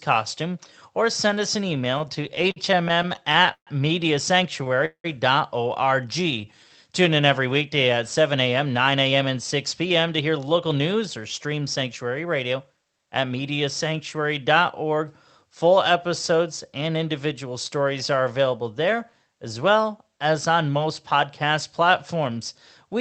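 Right after "or send us an", from 1.78 to 3.69 s, there's a stretch of repeated stalls (stutter). Packets kept turning up late or slower than playback needed, so the jitter buffer kept draining, around twenty times in under two seconds. Each time the receiver held the last sound going until it could continue. That filler adds up to 366 ms, about 19% of the stretch, with the longest hold at 133 ms. Nothing's actually lost, but the speech drags and hiccups.

At 4.64 to 4.68 s there's a short stall from a late packet. One packet wasn't there on time, the buffer ran dry, and the receiver stretched the preceding sound by 15 ms before picking up where it left off. You hear it as a sound hanging on a touch too long, with a faint buzz or dip, and the audio ends up that much later.

Just after that, from 4.85 to 5.06 s, the sound freezes. For 188 ms the last bit carries on as a buzzy tail that fades out, with about 90 ms of near-silence, and then the speech resumes exactly where it stopped. 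That's likely a call audio freeze, with packets held up in transit until the buffer ran empty. Nothing is missing. It's a gap inserted into the flow.

From 6.09 to 6.78 s a jitter buffer slow-down kicks in. The buffer was low or had just raised its target, so the receiver padded things out by repeating single pitch periods and slivers of pause, adding 89 ms. Playback runs at about 88% speed with the pitch unchanged, so sounds get drawn out.

Then from 8.49 to 13.33 s it goes the other way, a jitter buffer speed-up. The buffer was holding more than it wanted, so it trimmed short pitch-period chunks over and over, around 400 ms in total. The speech runs at about 108% speed at the same pitch and comes across a bit hurried.

All of this rides on the Opus call path, at 32 kbps with 8 kHz audio bandwidth.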